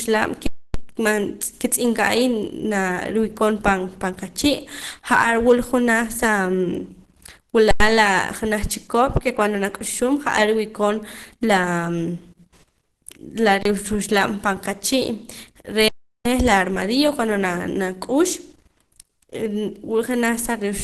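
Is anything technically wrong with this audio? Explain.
Yes, there are two problems. Underrun with held sample occurs at 0.46–0.74 s, 7.71–7.80 s, 13.63–13.65 s and 15.88–16.25 s. The output buffer ran dry and its last value was held, so the waveform shows flat lines; audio is lost and each then resumes.

Opus compression, likely in its hybrid speech mode at a low rate, leaves the speech muffled, hoarse and grainy, and the spectrogram shows nothing above about 12.1 kHz.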